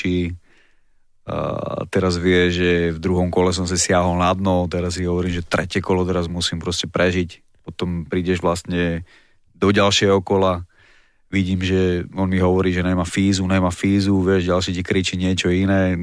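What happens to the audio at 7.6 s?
Nothing goes wrong at 7.6 s: the speech carries straight through that moment without any dropout, click, glitch or other fault.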